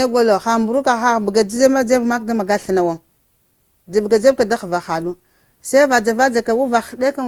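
Generation loss runs through the whole speech clip: the sound is swirly, hollow and smeared, with soft, blurred consonant attacks. This likely comes from repeated Opus encoding at around 64 kbit/s, roughly five passes, each re-quantising on a shifted frame grid.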